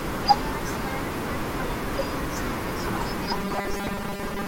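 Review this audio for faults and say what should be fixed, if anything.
Robotic sound from repeated short buffers appears at 3.27 s and continues to the end at 4.48 s. The speech becomes a rigid, metallic buzz fixed at 200 Hz. That pitch fits a repeated 5 ms stretch of audio. The likely cause is new audio arriving too seldom, so the playback fills the gaps by replaying the last short buffer. Roughly two-thirds or more of this section is repetition, and the real audio in between is lost. To prevent it, give the audio path a larger jitter buffer and keep the capture and network feed steady so playback is never starved.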